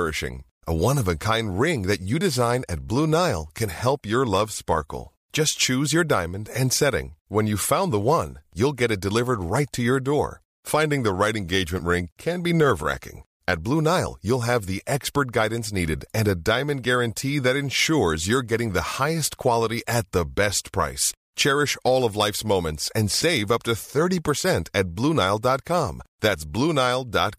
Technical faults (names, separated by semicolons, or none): none